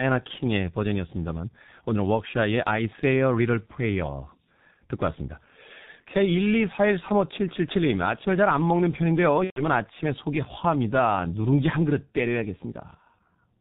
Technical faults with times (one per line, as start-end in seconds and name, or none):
0.00-13.61 G.723.1 codec
9.44-9.62 VoIP packet loss concealed by the speech codec